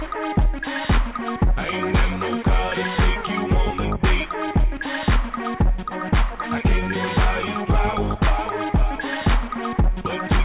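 No technical faults can be heard anywhere in the audio.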